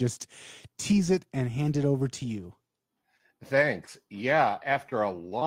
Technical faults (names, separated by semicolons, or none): none